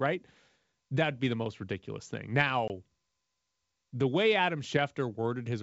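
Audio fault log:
2.68–2.71 s, packet loss on an ADPCM call: a hard-edged gap of about 20 ms, roughly one packet, opens in the speech. The decoder's predictor and step size lose sync with the sender's. On resuming, the speech sounds slightly distorted before settling.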